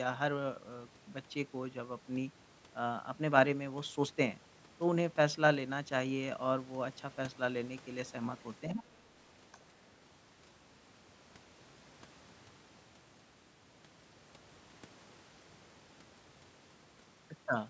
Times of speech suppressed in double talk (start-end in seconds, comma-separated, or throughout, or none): 8.71-8.82